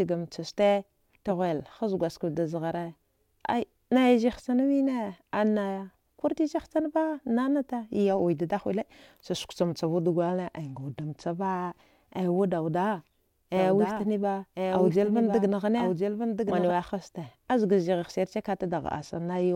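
From 10.19 to 11.35 s, a congested Bluetooth link forces a Bluetooth SBC bit pool drop. The sound points to the bit pool falling from 31 to 14, near 99 kbps. The top sub-bands are starved and the rest coarsely quantised, so the treble dulls and gritty noise rises. The same dulling and grit return from 18.61 s to the end.

Between 13.57 and 16.71 s, a doubled audio track appears, likely from a second, slower capture path mixing in another copy of the same audio. A full-band duplicate trails about a second behind, a few decibels quieter, with no decay or room colour. It starts and stops abruptly.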